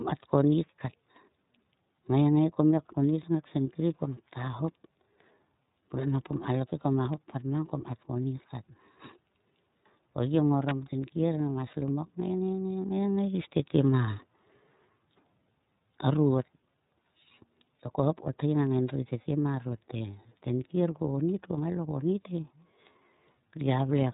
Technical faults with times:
0.00-24.13 iLBC codec
10.69-10.71 electrical switching spike

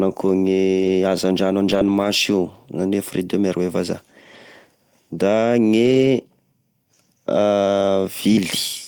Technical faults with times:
0.79-0.89 lost packet rebuilt from error correction
1.71-2.05 lost packet rebuilt from error correction
5.85-6.07 lost packet rebuilt from error correction
7.81 lost packet rebuilt from error correction

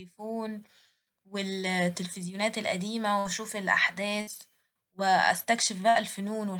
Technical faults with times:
3.19-3.28 burst of packet loss
4.21-4.30 burst of packet loss
5.89-5.98 burst of packet loss

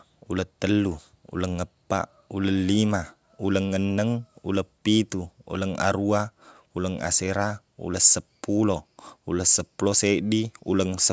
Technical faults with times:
none

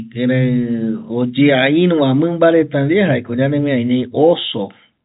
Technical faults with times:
none

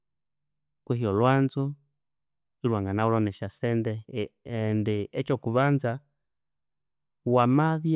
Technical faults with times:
none

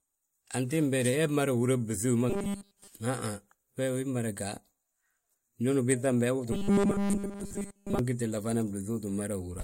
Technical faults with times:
2.30-2.88 robotic sound from repeated short buffers
6.52-7.99 robotic sound from repeated short buffers

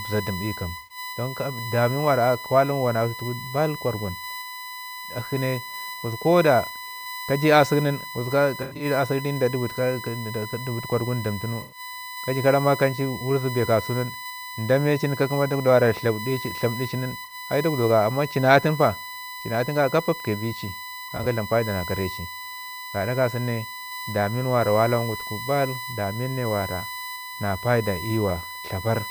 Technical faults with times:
0.00-29.11 USB whine
0.77-0.98 AAC frame loss with concealment
8.62-8.85 AAC frame loss with concealment
11.61-11.79 AAC frame loss with concealment
17.24-17.34 AAC frame loss with concealment
21.08-21.26 AAC frame loss with concealment

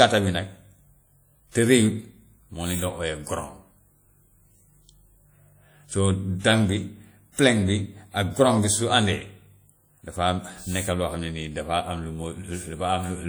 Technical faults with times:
0.00-13.29 WMA compression

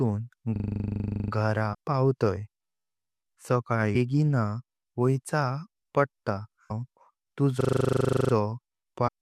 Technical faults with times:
0.56-1.32 system hang loop
1.73-1.75 damaged data in a compressed stream
3.95 damaged data in a compressed stream
6.70 damaged data in a compressed stream
7.61-8.33 system hang loop
9.07-9.09 damaged data in a compressed stream

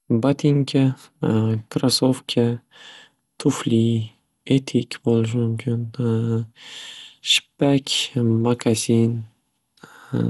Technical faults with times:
0.00-10.29 generation loss

